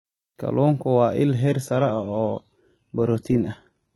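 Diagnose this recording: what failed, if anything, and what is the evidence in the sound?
Adaptive stream at a lower bitrate from 1.42 s: with no gap, the speech abruptly loses everything above 11.8 kHz as the slowed network forces a lower-bitrate codec version.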